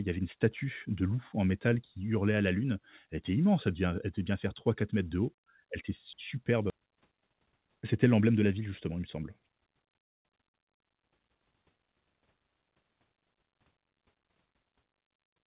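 Skip ahead, at 6.70 to 6.72 s: about a second of speech never reached playback, either lost in transit or discarded when the jitter buffer overflowed while newer audio was already queued. Nothing fills the hole. The sound before and after is butted together almost directly, so the speech lurches forward mid-flow with no pause to mark the missing stretch, and the listener simply loses that second of content.

Jitter buffer speed-up, from 6.79 to 9.00 s: after the jump, the buffer is still holding more audio than its target, as happens when delayed packets arrive in a burst. To shrink that backlog, the receiver repeatedly cuts out tiny pieces one or a few pitch periods long, removing roughly a third of a second in total. The speech plays about 14% fast at unchanged pitch and sounds hurried, all carried in the narrow call band that stops at 4 kHz.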